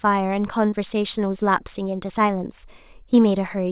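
A brief smear in this speech clip, at 0.70 to 0.74 s, sounds as though the sound is momentarily held over and then rejoins the flow with a wobble. This is short concealed packet loss: about 20 ms of the call audio arrived too late for the decoder, and the receiver patched roughly 18 ms of the gap by extending the preceding sound before blending back into the real signal. The narrowband call codec, with nothing above 4 kHz, gives everything a telephone-band tone.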